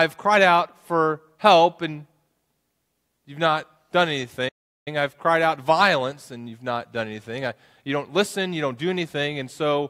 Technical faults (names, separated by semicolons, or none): playback stall